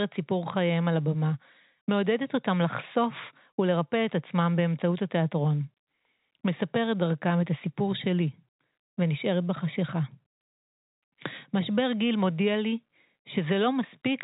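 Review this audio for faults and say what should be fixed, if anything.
Nothing here needs fixing: the speech sits in G.711 mu-law telephone coding at 64 kbps working as intended, with the band ending near 3.8 kHz and the format's quantisation noise at most faint beneath the signal.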